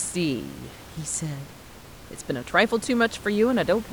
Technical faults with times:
none

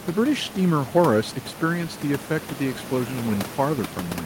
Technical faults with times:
none

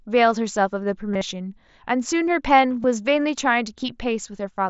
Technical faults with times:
1.14-1.21 concealed Bluetooth headset packet loss
2.83 concealed Bluetooth headset packet loss

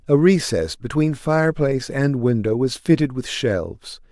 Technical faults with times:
none

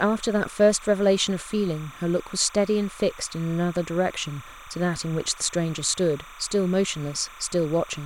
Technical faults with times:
0.00-8.05 timecode bleed

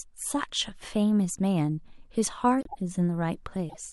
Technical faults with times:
2.61-2.77 corrupt frame muted
3.69-3.76 corrupt frame decoded

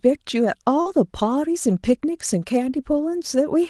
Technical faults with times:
0.81-0.87 short concealed packet loss
0.85-0.91 lost packet rebuilt from error correction
1.69-1.71 lost packet rebuilt from error correction

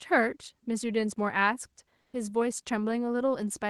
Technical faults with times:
2.01-2.13 comfort noise in place of the background

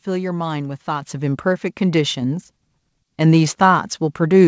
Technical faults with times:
1.02 microphone volume stepped up

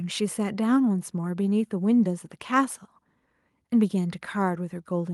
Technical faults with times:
none

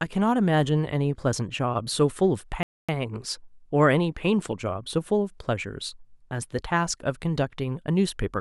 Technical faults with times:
2.63-2.89 playback stall

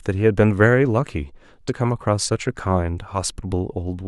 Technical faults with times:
1.68 compressed frames skipped
3.14-3.17 compressed frames skipped

